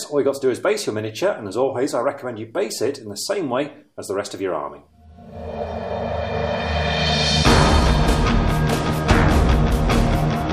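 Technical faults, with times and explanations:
Nothing technical stands out here; there's no fault to point to anywhere in the clip.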